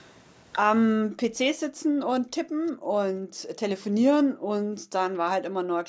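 Speech that repeatedly sinks into near-silence or breaks up, with drops as deep as roughly 40 dB from 0.97 to 1.38 s, 1.56 to 3.61 s and 3.78 s to the end. This is likely speech suppressed in double talk: with both sides talking at once, the echo canceller treated the near talker as echo and turned the voice down along with it. At 2.67 to 2.71 s a very faint copy of the voice slips through, arriving 348 ms late, which is likely an echo leak, where loudspeaker pickup on one end escaped cancellation and was sent back. The audio carries nothing above 8 kHz, as expected from the call's microphone processing.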